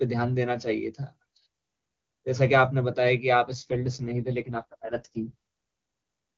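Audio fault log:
3.47–5.35 s, AMR rate drop: For almost two seconds the speech turns rough, raspy and synthetic, then clears again. The sound fits the wideband HD Voice codec being pushed from its top rate, near 23.85 kbit/s, down to its lowest, around 6.6 kbit/s. With far fewer bits, the pulse-based model of the vocal tract is coded much more coarsely. On a spectrogram the band edge stays near 7 kHz and the waveform has no gap, but harmonics look smeared.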